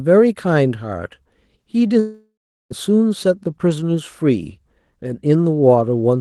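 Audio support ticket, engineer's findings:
Long network dropout, 1.99–2.72 s. The last sound is stretched into a fading buzz, then 0.39 s of silence. Audio resumes at 2.72 s with 0.72 s lost. Likely cause is packet loss: receiver concealment extrapolated, then muted. Opus path audible as a band limit near 12 kHz.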